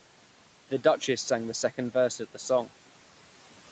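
Noise suppressor artifacts run through the whole speech clip: the background is pulled down by about 12 dB band by band, so it sinks between phrases and returns under them. A noise gate would instead silence everything abruptly, without band-by-band shaping.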